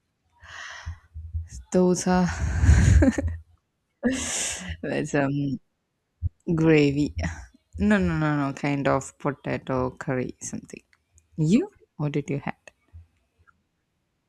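No technical faults can be heard anywhere in this speech recording. Nothing in the sound marks any point as having gone wrong.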